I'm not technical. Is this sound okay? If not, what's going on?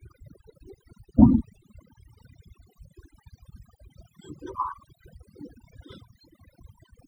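No, it isn't quite okay. All the way through this speech clip you can hear overdone noise removal. A noise-cleaning tool was pushed too hard, so besides the background noise it also chopped out quieter bits of the voice, one narrow slice of sound at a time. That's why the background between phrases drops away and breaks up into twinkly, warbling specks.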